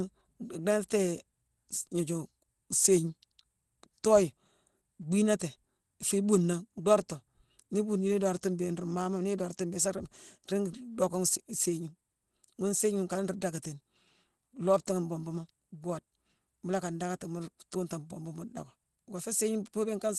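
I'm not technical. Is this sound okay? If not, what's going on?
Yes, this speech sounds fine; nothing wrong stands out.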